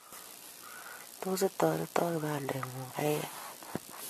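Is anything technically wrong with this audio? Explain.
Yes. Throughout the speech there is generation loss, most likely from repeated AAC encoding at around 64 kbit/s, roughly four passes. Each pass requantises on shifted frames, leaving swirly, hollow, smeared sound, softened consonant attacks, and spectrograms showing patchy holes and blurred onsets.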